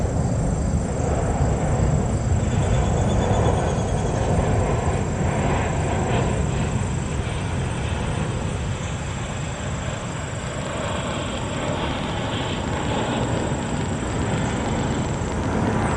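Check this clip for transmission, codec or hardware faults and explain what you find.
One fault is present: a train of clicks from 10.47 s to 15.92 s, running to the end of the clip.

Train of clicks, 10.47 to 15.92 s: Around fifty near-identical pulses arrive at about 10.7 per second, with uneven spacing, peaking roughly 10 dB above the surrounding sound. The likely cause is electrical interference from nearby equipment or a faulty connection or power supply injecting brief spikes into the signal path. It is heard as a ragged ticking laid over the audio. Unlike random crackle or a lone dropout click, these pulses share one shape and keep coming throughout that stretch.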